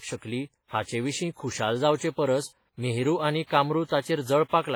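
From start to finish the speech carries heavy transform-codec damage, most likely WMA compression at a low bitrate, around 24 kbps. Quantisation noise smears across long blocks. Each syllable gets a ringing, washy halo. A hiss rises and falls with the voice. Weak spectral detail has been zeroed out. Content extends up to about 21.5 kHz.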